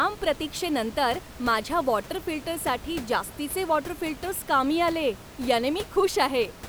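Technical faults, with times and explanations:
No technical faults are present.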